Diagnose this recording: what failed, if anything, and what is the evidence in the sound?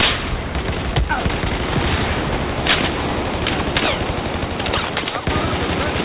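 Aliasing runs through the whole recording, and it points to the sample-format conversion stage: a resampling step that skipped its anti-alias filter, consistent with a 48 kHz source dropped to 8 kHz. Content above the 4 kHz fold point has mirrored back down as gritty, metallic tones unrelated to the sound, at roughly 10 dB below the signal. Plain band-limiting would leave the top dull and empty. Here the spectrum stays crowded right up to the 4 kHz edge.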